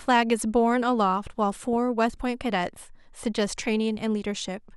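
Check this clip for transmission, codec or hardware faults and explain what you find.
One fault is audible. DAB burbling at 1.73–1.76 s: bit errors from weak reception slip past error correction into the MP2 data, so wrong samples put short blips of noise into single sub-bands, giving a short burble over the speech.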